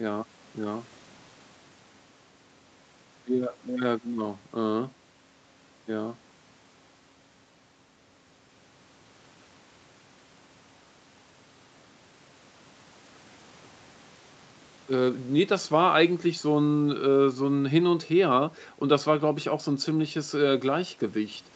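Nothing stood out as a fault on listening to this speech, which has the band-limited sound of a call path with no content above about 8 kHz.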